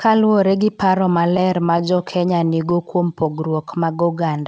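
From 1.37 to 2.74 s, repeated stalls (stutter): seventeen brief buffer underruns, each 12 ms or less, are patched by continuing the last sound, so the speech drags and stutters without losing content. From 3.23 to 4.14 s, a jitter buffer slow-down repeats pitch periods to rebuild its reserve, adding 102 ms and playing at 90% speed, drawn out at unchanged pitch.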